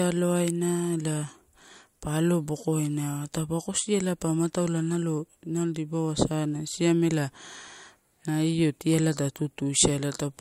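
No technical faults can be heard anywhere in the recording.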